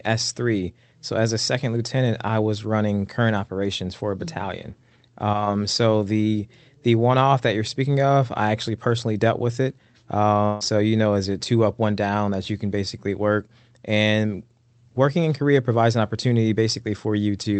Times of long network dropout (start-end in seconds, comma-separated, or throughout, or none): 10.45-10.63